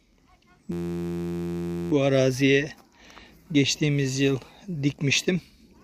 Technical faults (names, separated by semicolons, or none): system hang loop